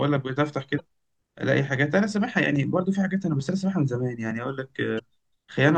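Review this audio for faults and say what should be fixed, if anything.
Two short bursts of damaged data in a compressed stream appear in this speech. The first runs from 0.77 to 0.80 s. The second runs from 4.95 to 5.01 s. Each is a brief chirp or blip lasting a few tens of milliseconds. Corrupted bytes reach the decoder, which misreads those frames and loses sync until it finds a valid frame header. Fix this by re-encoding from a clean source and verifying file integrity with checksums after transfer.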